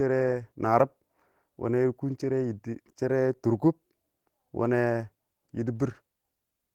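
No technical faults are audible.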